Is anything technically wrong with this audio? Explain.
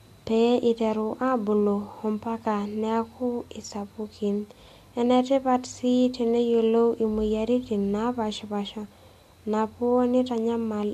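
No, nothing technically wrong can be heard in this speech recording; levels, timing and signal continuity all hold steady throughout.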